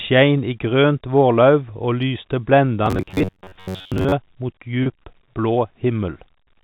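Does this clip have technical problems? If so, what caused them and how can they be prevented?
Yes. From 2.86 to 4.12 s, audio likely reached the playback buffer too seldom, so a short buffer was replayed. The result is robotic sound from repeated short buffers: a rigid, metallic 94 Hz buzz. A larger buffer or steadier scheduling of the audio thread would prevent it.

At 4.83 s, packet loss with pitch repetition covered a 30 ms gap by repeating the last pitch period, which leaves a brief, held, buzzy note. An adaptive jitter buffer or forward error correction would cover such losses.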